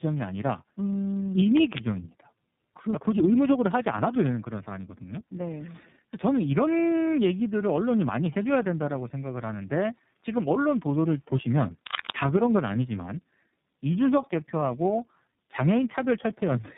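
Speech with tandem speech coding throughout: AMR-NB and then iLBC, bridged by G.711, stack their damage, giving rougher, more warbly speech than either codec alone, cut off above 3.8 kHz. From 1.56 to 1.80 s, cable scratch noise, a dense, uneven rustling burst about as loud as the speech, likely from a worn cable or connector being moved, unlike isolated single clicks.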